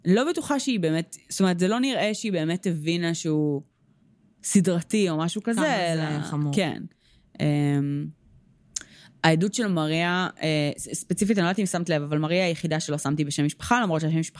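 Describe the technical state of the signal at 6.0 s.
At 6.0 s the speech signal is intact, with no dropout, clipping, glitch or other audible fault.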